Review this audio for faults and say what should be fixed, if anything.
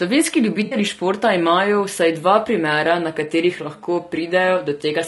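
The speech sounds rough and grainy throughout. Noise fills the gaps between harmonics, and the top band sounds thin and synthetic. This is likely low-delay AAC compression at a low rate, which fits about 32 kbps. Its short frames resolve pitch poorly. Raise the bitrate or use a longer-frame codec mode.

From 0.65 to 0.75 s there is a smeared, noisy, phasey patch. This is AAC frame loss with concealment. The decoder rebuilt the missing audio from the last good spectrum, which fits about 60 ms of lost frames. Add redundancy or forward error correction to the transport.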